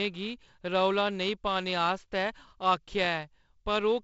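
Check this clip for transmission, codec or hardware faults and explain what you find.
Nothing stood out on listening to this speech, which has the band-limited wideband-telephone character of G.722 coding with no content above about 7.7 kHz.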